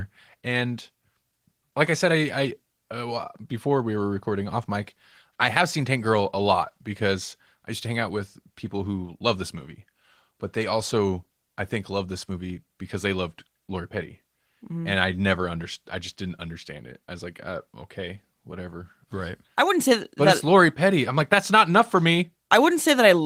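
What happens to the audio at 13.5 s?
Nothing goes wrong at 13.5 s: the speech there comes through intact, carried by Opus voice compression in hybrid mode at 20 kbps with only light coding colour.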